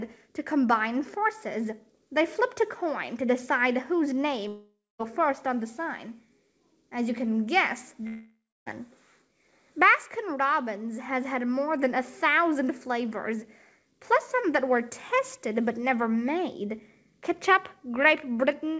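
A long network dropout is the likely cause of two gaps, at 4.48 to 5.01 s and 8.07 to 8.68 s. Packets stopped arriving for about 0.52 s and then 0.60 s, and the receiver stretched the last sound into a fading buzz before settling into silence for roughly the final 0.24 s and 0.29 s. When the sound resumes, the lost stretch is simply gone. Throughout, nothing is heard above 8 kHz, consistent with a G.722 call codec.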